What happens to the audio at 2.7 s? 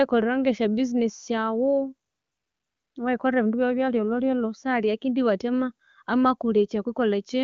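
At 2.7 s the background is replaced by AMR comfort noise, from 2.09 to 2.95 s. The phone judged the talker silent, stopped sending speech frames, and the receiver synthesised a smooth, steady hiss from a coarse level-and-spectrum description. Unlike a dropout, it is filled noise, not dead silence.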